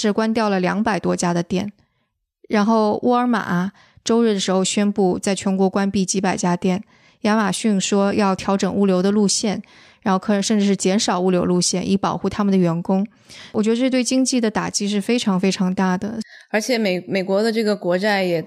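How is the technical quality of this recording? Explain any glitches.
There is one glitch, a single sharp tick at 5.51 s, peaking at about -37 dBFS. It is a bit error spike: a flipped bit briefly pushed the sample value away, which fits an error lasting only a sample or two.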